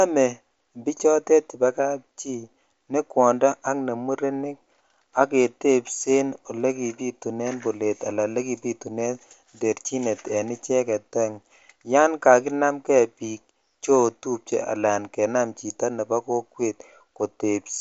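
No technical faults can be heard in this speech recording, which passes through a Bluetooth mSBC headset link whose wideband limit leaves nothing above about 7.7 kHz.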